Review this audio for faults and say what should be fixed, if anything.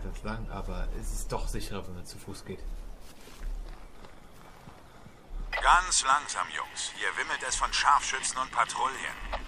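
Nothing to fix; no faults detected anywhere in the clip.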